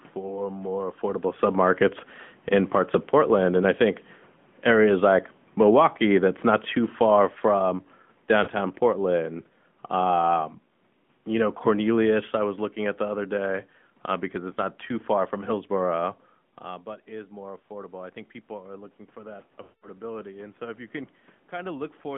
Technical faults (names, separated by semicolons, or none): AMR narrowband mobile codec; lost AMR speech frames